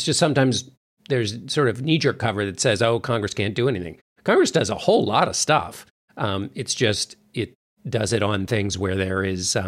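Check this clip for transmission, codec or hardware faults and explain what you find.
No transmission, codec or hardware fault can be heard in the speech, and the dips to silence in the pauses come back in time for each following sound without losing any of it.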